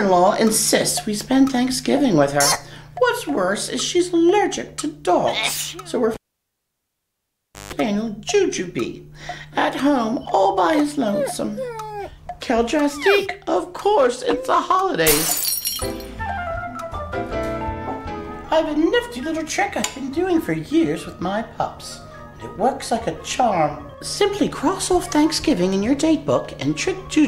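At 6.14 s a live cable gets pulled and plugged back in. You hear a pop, then about 1.5 s of near silence. A short burst of 50 Hz mains buzz lasts roughly 160 ms while only the tip makes contact. A second pop comes at 7.73 s as the signal returns.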